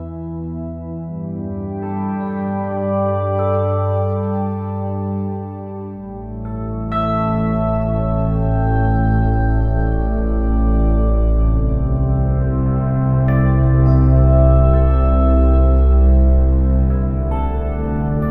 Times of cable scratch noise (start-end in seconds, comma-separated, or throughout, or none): none